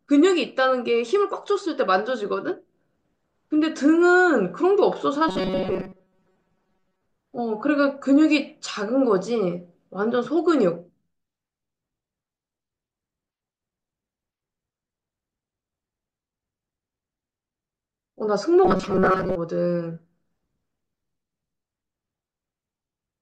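From 5.29 to 7.02 s and 18.65 to 19.36 s, the speech turns into a metallic 188 Hz buzz: robotic sound, likely from repeated short buffers of about 5.3 ms.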